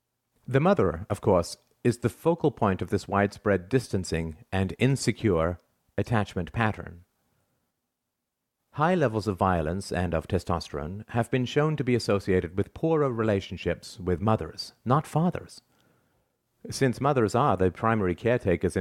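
No technical faults can be heard anywhere in this speech recording. There is nothing in the audio that calls for a timestamp or a closer listen.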